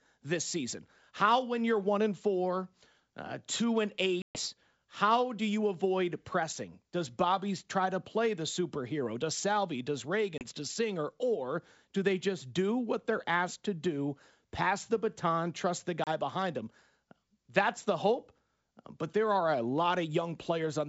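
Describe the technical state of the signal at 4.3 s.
Packet loss on an ADPCM call spans 4.22 to 4.40 s, after "four uh two and": about 130 ms of sound, consistent with a dozen or more short packets, drops into a hard-edged silent gap. The decoder's adaptive predictor and step size lose sync with the sender's, so the sound resumes at "how do you avoid" at the wrong level or with a click and some distortion, settling within a few tens of milliseconds.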